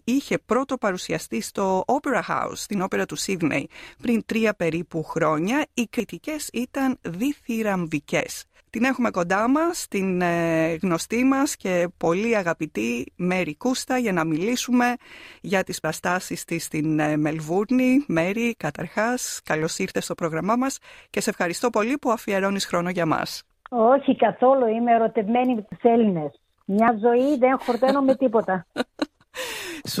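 The audio skips ahead at 6.0, 8.2, 15.84, 25.72 and 26.88 s, losing a few tens of milliseconds each time (closer to a tenth of a second at 15.84), most likely dropped buffers from an overrun.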